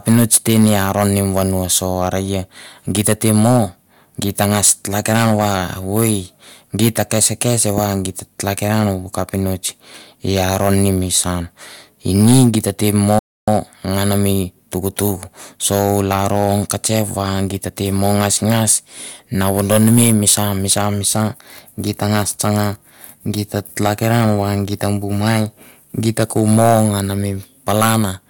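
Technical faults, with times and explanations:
Throughout: hard clipping. The speech is driven roughly 10 dB past what a stage in the chain can pass, so peaks are sliced flat. Only a small fraction of samples is cut, but the flattened tops add high harmonics, heard as crackly fuzz on louder syllables.
13.19 to 13.48 s: rebuffering stall. Playback halts into silence for about 0.29 s, then picks up exactly where it stopped. The player ran out of downloaded audio and waited for more, so nothing is missing, but the gap lengthens the clip.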